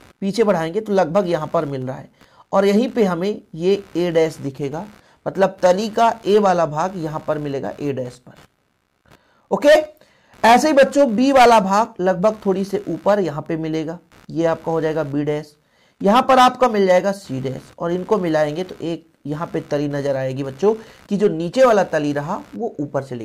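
A ground shared between the audio circuit and the computer is being disturbed by load changes in the machine, and that disturbance leaks into the audio as computer activity noise for the whole clip. It comes through as a buzzing, scratchy layer pulsing at around 70 per second, sitting roughly 35 dB below the main sound. Because it follows the computer's workload rather than the audio itself, it flickers and shifts in texture independently of what the sound is doing.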